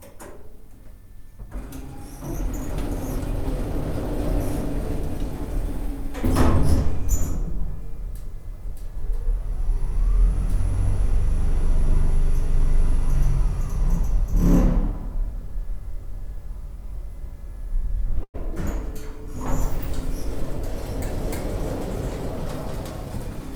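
At 18.23 s the sound stalls for about 0.13 s in a call audio freeze. The last sound smears into a brief fading buzz or hiss, then 60 ms of silence. Packets were likely delayed and the jitter buffer emptied. Playback resumes where it stopped, nothing lost, now 105 ms later.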